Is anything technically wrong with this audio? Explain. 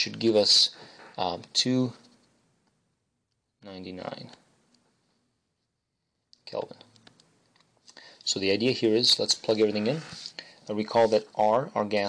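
No, nothing is technically wrong with this audio.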